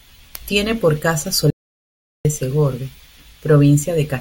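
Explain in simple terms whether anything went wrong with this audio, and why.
Something did go wrong. Right after "por casa", at 1.50 seconds, the speech cuts off into total silence. It returns at 2.25 seconds. This is an audio dropout to silence. For about three quarters of a second, even the background room sound vanishes. The input signal was likely lost, so only silence was recorded. Whatever was said then is gone.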